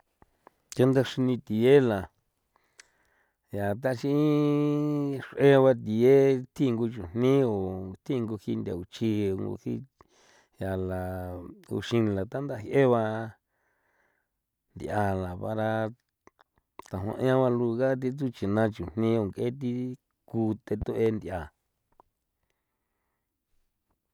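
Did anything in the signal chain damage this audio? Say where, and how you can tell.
Yes. A loud pop lands between 20.82 and 21.10 s: two sharp pops in quick succession, peaking a few decibels above the speech, which carries on underneath. A pair of clicks over continuing speech points to a likely step in voltage at the analogue wiring stage, such as a plug being disturbed or a static discharge. The circuitry downstream shapes each jolt into the pop that is heard.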